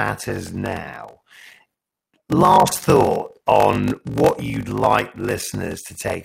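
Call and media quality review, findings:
Block size mismatch (padded), whole clip: steady buzz at 46.9 Hz under the speech, with everything running at 0.861x speed but near normal pitch. That fits a stage writing about 882 samples into 1024-sample reads, with the rest of each block zero-filled, so you get a gap every block.

Clock drift buffer slips, 0.47 s to 5.90 s: about four clicks, one every 1.56 s, while there's signal. Most likely two devices on separate clocks, off by something like a tenth of a percent, with the buffer between them dropping or repeating about 70 samples at each slip.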